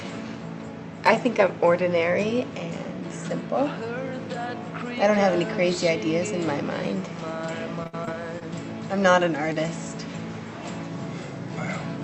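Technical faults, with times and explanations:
7.83 to 8.43 s, repeated packet loss (robotic sound): five gaps open in quick succession, the longest 62 ms. Each is patched by extending the preceding sound, about 118 ms in total, roughly a fifth of the stretch, while 60 ms of audio is lost outright, giving a choppy, robotic texture.
9.53 to 9.57 s, short stall from a late packet: a packet arrived late and the jitter buffer ran dry, so the receiver held the last sound for 20 ms and then resumed where it left off. Nothing is lost; the sound is stretched while playback delay grows by 20 ms.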